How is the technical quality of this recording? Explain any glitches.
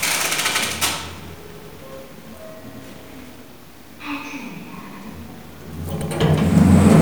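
Overlapping chunks cause repeated stutters at 0.52, 1.62, 3.82, 4.92 and 6.02 s. The audio was handled in 1-second blocks, each starting 100 ms before the previous one ended, so every join replays that 100 ms and produces a short, regular hiccup.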